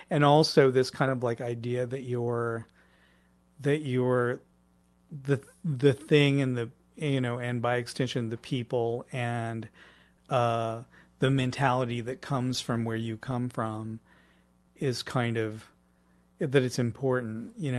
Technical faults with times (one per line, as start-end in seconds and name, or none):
0.00-17.78 clock drift between sender and receiver
0.36-17.59 repeated timing corrections